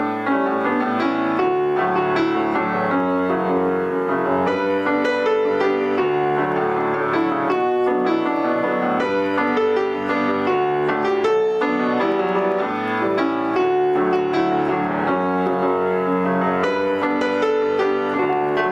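Gain pumping runs through the whole recording. The level is pulled down each time a loud sound arrives, a swing of around 10 dB. Loud and quiet passages sit unnaturally close in level and the sound is squashed. The likely cause is input gain set far too high, with a fast limiter or compressor clamping down on each peak.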